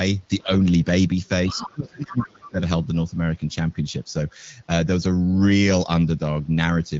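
At 0.44 to 0.52 s the speech dips briefly by about 10 dB. From 1.49 to 2.6 s it falls around 30 dB at worst. This is speech suppressed in double talk, likely the echo canceller attenuating the talker along with loudspeaker echo.

Within that gap, from 1.5 to 1.69 s and again from 2.21 to 2.27 s, the other side's voice leaks through as short scraps roughly 15 dB below the main speech. This is likely residual loudspeaker echo that the canceller left in the microphone signal.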